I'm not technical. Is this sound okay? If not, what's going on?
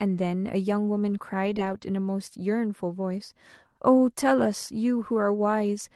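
No. For less than half a second, from about 1.45 to 1.83 s, the speech turns rough and noisier, with a couple of tiny smears or wobbles mixed in.

Most of that stretch is a lost packet rebuilt from error correction, at 1.45 to 1.51 s, 1.57 to 1.75 s and 1.81 to 1.83 s. Small chunks of the call went missing on the way. Each next chunk carried a cheaper backup copy of the missing one, and the receiver played that copy instead. There's no silence, but those moments sound grainier and less clear.

Twice, at 1.53 to 1.57 s and 1.77 to 1.81 s, there was no backup at all. That is short concealed packet loss. The receiver covered each 20-millisecond hole by stretching out the sound that came just before, then blended back into the real speech. That's what makes the brief smear or wobble.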